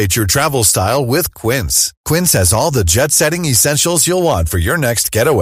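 From start to finish the speech carries hard clipping: the signal was driven about 6 dB past what a stage in the chain could pass, so the loudest peaks, around one percent of samples, are sliced off flat. On the waveform those peaks appear as squared-off plateaus; a spectrogram shows vertical smears of high-frequency energy at each one. To the ear it is a brief crackly edge riding the louder syllables.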